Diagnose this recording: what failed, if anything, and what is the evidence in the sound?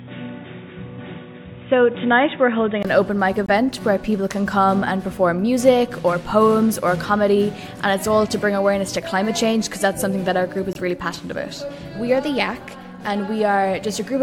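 From the start to 2.85 s, the sound is band-limited, with nothing above 3.8 kHz. It is dull and boxy. A faint background noise sits well below the signal, about 40 dB down. The level stays the same. At 2.85 s there is a 20 ms silence, and then the full bandwidth returns. The stage is the input device path. The likely cause is an input switched to a poorer device, such as a headset's call profile, with the system changing back to the proper microphone at the gap.

Two abrupt holes of pure silence appear, at 3.46 to 3.49 s and at 10.73 to 10.77 s. They last about 32 ms and 42 ms. Each starts and stops sharply, and timing around them is unchanged. Each gap fits a single compressed frame. The stage is the codec, at decode. These are corrupt frames muted: flipped bits made the decoder reject a frame, and the player filled its slot with silence.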